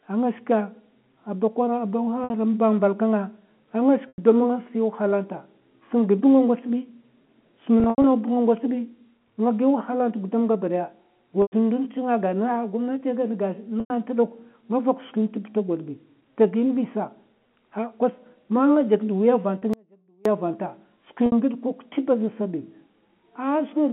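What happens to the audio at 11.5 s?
At 11.42 to 11.52 s there is packet loss with pitch repetition: about 100 ms of audio is missing, which fits five 20 ms packets. The receiver fills the gap by looping the last pitch period, so the sound briefly holds as a buzzy, static tone, fades out over roughly 50 ms into silence, and then cross-fades back in. On a waveform this shows as identical repeating cycles shrinking to flat. On a spectrogram, frozen harmonics fade to a blank gap, all within the telephone band ending at 3.4 kHz.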